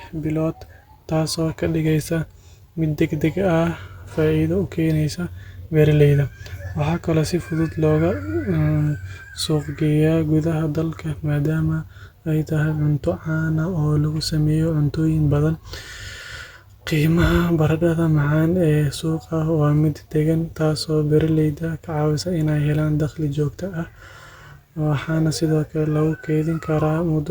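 Nothing here stands out as a technical fault; the speech just runs along without any glitch, dropout or distortion to point to.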